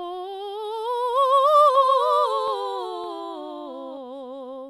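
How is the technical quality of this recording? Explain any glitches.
The recording has one clear glitch, a doubled audio track, from 1.75 s to 3.97 s. Over that stretch the music is heard twice: a second, full-band copy trails the original by about half a second, sitting around 5 dB quieter. It carries no decay or room colour, so it reads as a detached repeat rather than an echo, and it cuts in and out abruptly at both ends. The likely cause is the same signal being captured again through a slower path, or an edit leaving two copies out of alignment.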